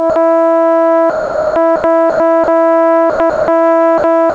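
At 0.10 s the music briefly gives way to a 60 ms patch of steady synthetic noise. This is sound dropped by the voice detector, likely because the sender mistook the music for background and sent comfort noise instead.

From 1.10 to 1.84 s, 2.10 to 2.48 s and 3.10 to 3.48 s the music turns choppy, flickering between real sound and comfort noise. This is sound chopped by the voice detector, likely toggling on and off repeatedly and replacing about 540 ms, 140 ms and 280 ms respectively.

Shorter 60 ms and 50 ms dropouts to steady noise follow at 3.98 s and 4.30 s, again from the same likely detector misjudgement.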